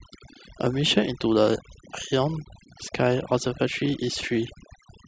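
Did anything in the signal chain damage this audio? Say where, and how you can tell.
Yes. Overdone noise removal damaged this speech clip, and it runs through the whole recording. The stage is processing, a noise reduction step set far too strong. You can hear it in the gaps. The background drops to near silence, dotted with twinkling specks. The reducer cuts individual frequency bands whenever they sit near its noise estimate. Quiet parts of the voice fall below that line and vanish along with the noise.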